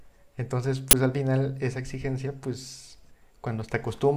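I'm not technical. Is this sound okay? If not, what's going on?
No. At 0.91 to 0.93 seconds there's an uninitialised buffer: the system played a 20-millisecond chunk of memory before any real audio had been written into it. The leftover data comes out as a brief, loud crack cutting into the speech.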